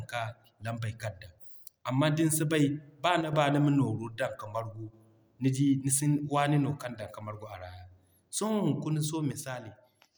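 At 3.21 to 3.33 s, and again from 9.32 s to 10.15 s, the speech drops abruptly by about 6 dB and then snaps back, most likely one channel dropping out. Unlike a gain fade, there is no ramp, only a clean step at each edge.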